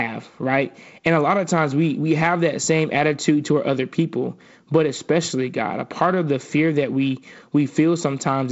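No technical faults can be heard in this speech recording. It has the sound of G.722 wideband telephone coding at 48 kbit/s, with nothing above about 7.7 kHz and a light coding texture, most noticeable as a faint hiss in the upper band and a slightly grainier lower band.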